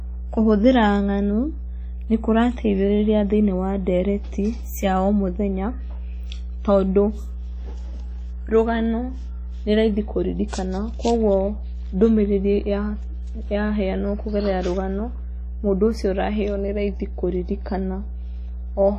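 Mains hum runs under the whole clip, a steady 60 Hz tone sitting roughly 10 dB below the speech, the sort of thing a ground loop or a nearby transformer leaks into the line. Throughout, there's also heavy codec damage that sounds ringing and washy, with hiss breathing along with the speech. That's likely WMA compression at a low bitrate, around 32 kbps, smearing quantisation noise and dropping weak detail.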